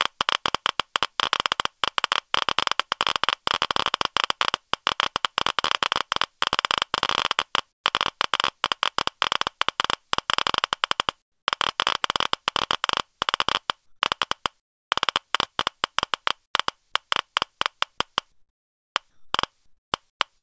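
Comfort noise in place of the background appears in this recording of everyday sounds at 7.72–7.84 s, 11.22–11.48 s, 13.86–14.02 s, 14.60–14.92 s, 16.46–16.54 s, 18.32–19.34 s and 19.66–20.20 s. In each gap the real ambience gives way to a flat, textureless hiss, in the measured gaps about 2 to 17 dB quieter. The likely cause is discontinuous transmission: the sender goes silent during quiet stretches and the receiver synthesises roughly matched noise. The audio also has nothing above 8 kHz, which fits a wideband call codec such as G.722.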